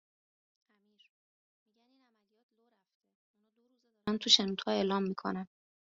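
A speech clip that opens with a 24-bit alignment error, making it far too quiet from 0.0 to 4.07 s. The samples were written as 24-bit integers in the low bytes of a 32-bit word but read as full 32-bit integers, so every value lands eight bits too low, a drop of about 48 dB. The sound stays clean but is barely audible. On a waveform this stretch is an almost flat line; a spectrogram shows the same speech patterns, only very faint.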